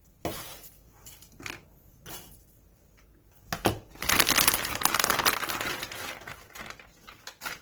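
Throughout, the sound turns grainy and rough, with tones smeared into noise, likely from Opus compression in its CELT music mode at a starved bitrate near 16 kbps. At 4.65 s a sharp snap sits on top of the audio, likely an electrical switching spike from a nearby switch or discharge.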